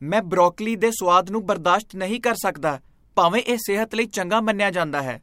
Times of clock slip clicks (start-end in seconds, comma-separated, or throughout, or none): 0.36-5.03